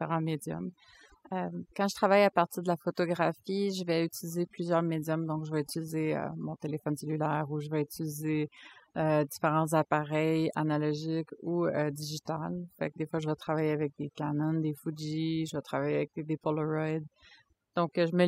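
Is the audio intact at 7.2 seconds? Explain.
No. Overdone noise removal runs through the whole recording, including 7.2 seconds. The noise reducer cuts individual frequency bands sharply whenever they sit near its noise estimate, taking quiet parts of the speech along, so the background drops and breaks up into twinkling specks.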